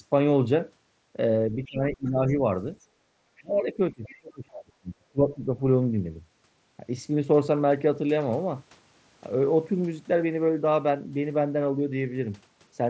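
From 1.51 to 2.42 s the speech dips by up to about 25 dB over roughly half a second, likely speech suppressed in double talk as the echo canceller ducks both voices; the waveform envelope pinches and the spectrogram's harmonics fade in patches. A faint scrap of the other side's voice leaking through sits at 2.04–2.09 s, about 35 dB down, a ghost trace. From 2.80 to 3.11 s the background is gated by the echo canceller, the room floor dropping up to 11 dB as a dark notch. Leakage returns at 3.37–3.42 s (about 30 dB down) and 4.04–4.17 s (about 25 dB down). The same suppression spans 3.39–5.39 s, about 30 dB deep across roughly 1.5 s of hollowed waveform and thinned spectrum. There is one more shallow dip of about 5 dB at 5.56–5.63 s. The spectrum stops at 8 kHz throughout, matching the wideband headset path.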